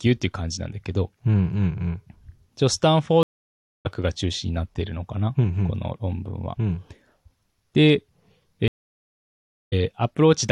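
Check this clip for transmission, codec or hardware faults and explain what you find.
Two stream reconnects. At 3.23 to 3.87 s and again at 8.68 to 9.74 s, the speech drops to silence for about 0.62 s and 1.04 s, then picks up roughly 0.4 s further on. The connection broke and the player restarted decoding mid-stream, skipping ahead.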